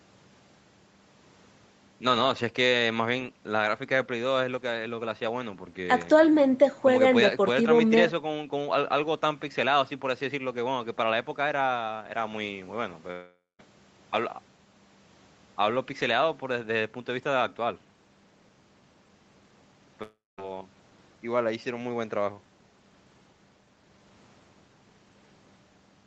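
At 13.11 s the speech gives way to a fading buzzy smear, then near-silence until 13.61 s. The same happens from 20.03 to 20.40 s. Both are long network dropouts, likely from lost packets. About 0.48 s and 0.36 s of audio never arrive. The receiver stretches the last sound before each gap goes quiet. Unlike a brief concealment glitch, each gap runs long enough for the fill to die out. The speech then resumes further on, with the missing stretch skipped.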